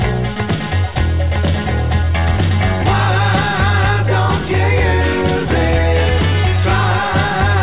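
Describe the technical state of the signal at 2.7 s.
At 2.7 s the signal is intact, with no dropout, glitch or distortion, only the narrow band of the call path, which carries nothing above 4 kHz.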